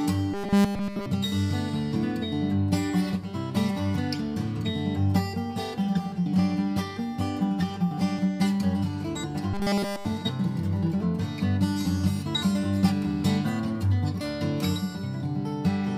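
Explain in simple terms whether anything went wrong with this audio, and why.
Robotic sound from repeated short buffers appears from 0.34 to 1.06 s and from 9.54 to 10.06 s: a rigid, metallic buzz around 200 Hz. The likely cause is fresh audio arriving too slowly, so a tiny 5 ms piece loops in its place. Unlike a dropout, it never goes silent.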